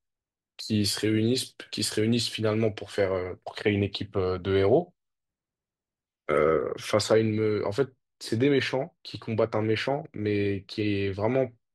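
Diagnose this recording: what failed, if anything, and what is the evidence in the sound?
From 6.40 s to the end at 11.74 s the speech turns dull and muffled, losing its treble smoothly. This is de-emphasis applied wrongly at the playback filtering stage: a treble-cut curve falling about 8 dB at 10 kHz relative to 1 kHz was applied without matching pre-emphasis.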